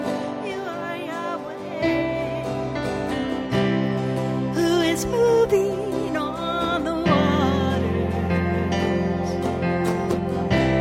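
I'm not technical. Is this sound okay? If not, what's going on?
Yes, nothing in this recording points to a technical fault.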